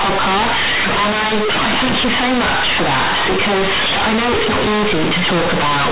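Speech with companded audio read as linear throughout: A-law bytes play as raw 8-bit samples without expansion, so each sign change swings across half the range. The waveform becomes a dense, bent block and the spectrogram a broadband smear filling the pauses, heard as loud, buzzy distortion.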